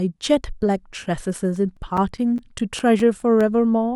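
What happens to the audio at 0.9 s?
Nothing goes wrong at 0.9 s; the speech there plays through intact, with no dropout, click, distortion or other fault at that point.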